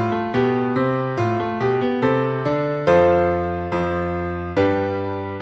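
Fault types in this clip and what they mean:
No technical faults can be heard anywhere in this audio. Nothing in it breaks, drops out or changes in a way that points to a recording or transmission problem.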